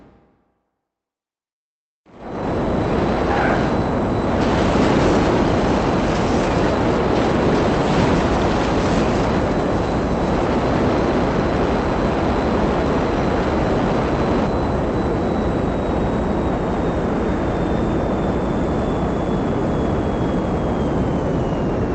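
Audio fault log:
Nothing stood out on listening; the audio came through the Opus call path without any fault to log.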